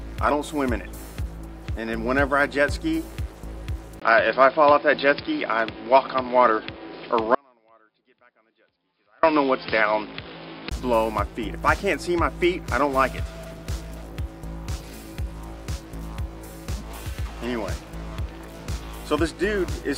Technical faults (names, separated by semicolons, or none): input switched to a poorer device; audio dropout to a faint residue